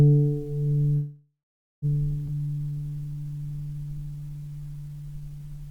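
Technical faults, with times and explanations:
0.95–1.85 s, call audio freeze: the sound stops moving forward for about 0.87 s. The last fragment is stretched into a fading buzz that sinks to silence for roughly the final 0.44 s of the gap. This is likely packets held up in transit, so the jitter buffer ran dry and the receiver improvised a fill. When audio returns it resumes exactly where it broke off, so nothing is lost. Instead, a pause has been inserted.
2.26 s, skip ahead: playback jumps abruptly forward, bridged by only a 15 ms join. Around 0.4 s of the audio simply vanishes, and the material on either side is butted together almost seamlessly. A stretch of audio was dropped while later audio was already waiting. That cut restores about 400 ms of the delay the freeze had added.
2.34–5.57 s, jitter buffer slow-down: for over three seconds the audio plays at about 87% of normal speed while keeping its pitch. 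Sounds feel drawn out, and there may be a faint warble. The buffer, left thin after the skip, rebuilds its reserve by repeating individual pitch periods and slivers of pauses many times over. Altogether this adds about 430 ms, which is why the timing drags rather than the tone dropping.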